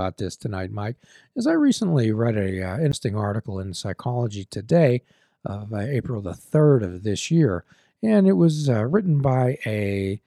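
At 2.92 s the speech is hit by a CD skip: the laser lost its track and landed on another turn of the spiral, so a brief mute of around 15 ms precedes a sudden jump in the speech. Unlike a plain dropout, the sound resumes from a different point, not where it stopped.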